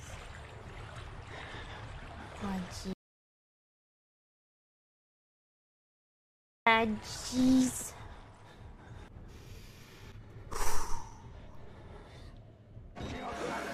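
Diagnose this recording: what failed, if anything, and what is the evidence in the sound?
An audio dropout to silence runs from 2.93 s to 6.67 s, roughly 3.7 s of pure silence with no room tone, cutting in and out abruptly. A noise gate would leave residual hiss; this likely reflects a lost input device or link while recording continued.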